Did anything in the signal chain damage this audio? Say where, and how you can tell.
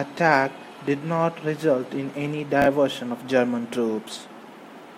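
Yes: a buffer stage delivered chunks out of order, one 20 ms chunk one slot late, at 2.62–2.66 s after "not result in any", producing a jumbled instant.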